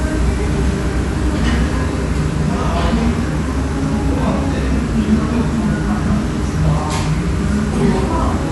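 Throughout the clip, the everyday sound has likely been through Dolby Digital compression at a low bitrate, one that fits a stream of about 64 kbps. Short of bits, the encoder has cut the band and left many frequency lines without real detail, so the decoder fills those gaps with noise. Nothing is heard above 11.4 kHz, which makes the audio plainly dull, and a rough, fluttering grain clings to the steadier tonal parts.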